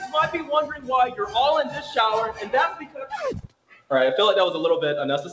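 A speech-tuned noise suppressor applied to music or sounds makes the level pump by around 10 dB across the whole clip, treating sustained material as noise. Sound cut by the noise suppressor sinks audibly at 0.71–0.89 s (about 8 dB), 1.11–1.35 s (about 9 dB), 1.67–1.97 s (about 7 dB), 2.32–2.50 s (about 9 dB), 2.70–3.17 s (about 14 dB) and 3.40–3.91 s (about 17 dB), with the held or decaying portions cut hardest. The audio also has nothing above 8 kHz from the call path, consistent with G.722 at 64 kbps.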